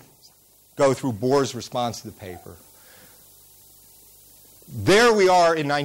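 Hard clipping at 0.81–0.93 s, 1.31–1.42 s and 4.88–5.79 s: peaks overdriven by about 9, 6 and 13 dB are squared off, adding crackle, then sustained harsh fuzz.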